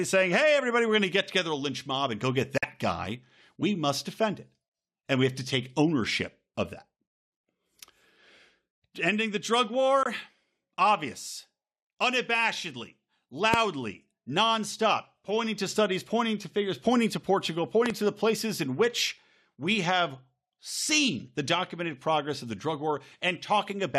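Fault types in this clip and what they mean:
Bluetooth dropout: Gaps at 2.58–2.64 s, between "mob and go get" and "guy we must defend", and at 10.03 s after "the drug". The speech cuts to abrupt silence and resumes as if it had played on, likely from wireless packets arriving too late and being dropped.
Loud pop: A single sharp pop at 13.54 s, about 20 dB above the speech, and a quick double pop at 17.86–17.92 s, just before "to the places in", about 15 dB above. The speech carries on underneath, pointing likely to a brief voltage spike.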